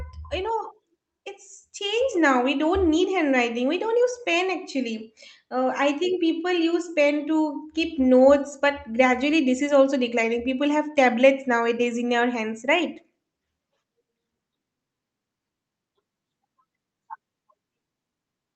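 No faults found in this speech, with the call path's coding audible as its usual coding noise and the expected top-end roll-off near 8 kHz.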